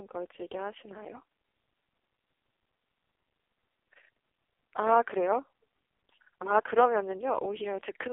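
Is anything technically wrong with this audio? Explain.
Yes. Throughout, the speech carries AMR narrowband mobile codec damage. It sounds like a phone call, confined to 300 Hz to 3.6 kHz. The heavy buzzy, synthetic quality suggests the lowest bitrate mode, about 4.75 kbps.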